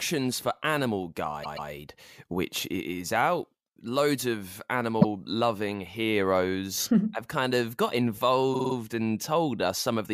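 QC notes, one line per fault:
1.43–1.69 s, repeated frames: a chunk of about 131 ms of speech plays two extra times, so you get a stutter, adding 0.26 s.
5.00–5.05 s, repeated frames: a single 26 ms block, which fits one codec frame, plays once more, so there's just a quick stutter and 26 ms of added length.
8.53–8.74 s, repeated frames: a 52 ms block loops four extra times, giving a rapid stutter and adding 0.21 s.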